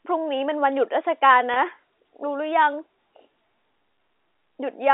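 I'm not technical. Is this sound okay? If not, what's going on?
No. Around 1.54 to 1.56 seconds, a tiny piece of the speech, about 20 milliseconds, went missing in transmission, a fault called packet loss with pitch repetition. To cover the hole, the receiving end replayed the last small cycle of the voice over and over. Because the gap is so short, you hear a brief, slightly held, buzzy moment in the speech rather than silence. The narrow telephone sound comes from ordinary G.711 telephone coding.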